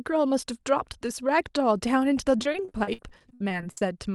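Speech over an Opus call path has repeated packet loss (robotic sound) from 2.37 to 3.82 s. Packets kept going missing or arriving late, and each gap, up to 60 ms, was patched by extending the previous sound. About 27% of that stretch is filled in, so the speech turns choppy with pieces missing.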